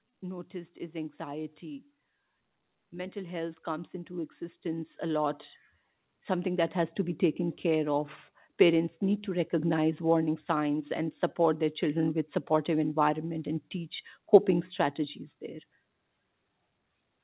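Automatic gain rising runs from 0.51 s to 7.28 s, ending just before "care of parents need". The gain control judged the incoming speech too quiet and kept pushing its level up over those nearly seven seconds, by about 14 dB in total. Because the boost applies to everything, the voice and the room noise behind it swell together, rather than the talker getting louder. This happens over a narrow telephone-style band with nothing above 4 kHz, which fits a G.711 call codec.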